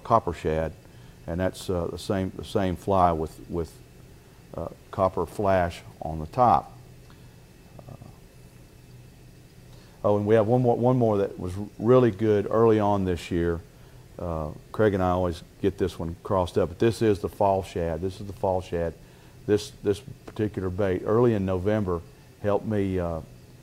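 No technical faults can be heard anywhere here.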